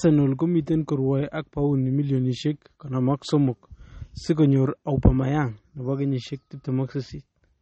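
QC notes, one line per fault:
Throughout: MP3 compression. Nothing is heard above 8.3 kHz, so the speech is dull and lacks air. Damage is plainly audible. The sound is watery and swirly, with metallic chirps on sibilants and smeared onsets. The likely cause is an encoder short of bits, which fits a low bitrate around 32 kbps. It cuts the treble at a fixed point. It also zeroes weak frequency lines, which then flicker on and off between frames.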